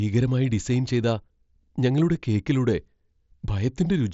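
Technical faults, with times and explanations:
No technical faults can be heard in this speech.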